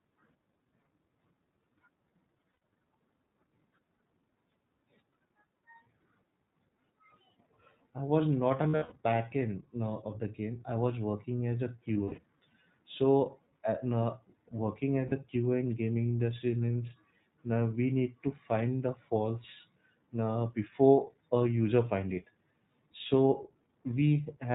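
Speech, coded with the iLBC codec throughout. Nothing above 4 kHz survives, and the voice sounds plainly rough and synthetic, fitting the 15.2 kbps, 20 ms frame mode. Lost iLBC frames cause brief buzzy, held-vowel fills at 2.55 s, 8.68–8.98 s after "I was not", 11.94–12.24 s after "was working as a", and 15.06–15.13 s after "uh now working". Clarity returns immediately after each.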